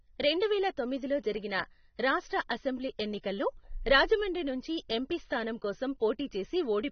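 From start to finish the speech has nothing above 6.3 kHz and carries plainly audible warbling, fizzy smearing on sibilants, which points to AAC compression, likely at a low bitrate around 24 kbps. Unlike a plain low-pass filter, which only dulls, this damage also swirls.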